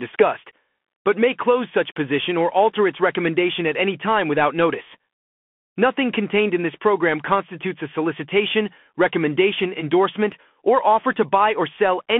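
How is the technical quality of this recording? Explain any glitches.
The recording is narrowband and audibly degraded throughout. The whole 12-second clip passed through a Bluetooth CVSD headset codec, which fits a 64 kbps link. Its one-bit, adaptive-step coding leaves only about 150 Hz to 3.4 kHz, so the speech sounds thin and muffled, with scratchy s sounds and a grainy hiss beneath it.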